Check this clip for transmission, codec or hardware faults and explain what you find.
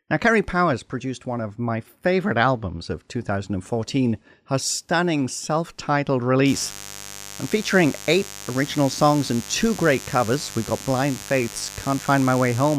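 A steady, raspy mains buzz sits under the speech from 6.45 s to the end at 12.78 s, roughly 15 dB below the voice. Its fundamental is 50 Hz: sharp switching spikes enter twice per mains cycle, spraying harmonics up into the several-kilohertz range.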